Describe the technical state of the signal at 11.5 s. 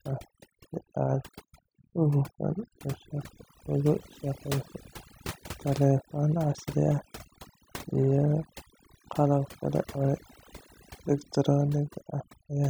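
At 11.5 s, overdone noise removal runs through the whole clip: bands near the noise estimate are cut away, leaving twinkling near-silence. A spectrogram shows scattered isolated specks.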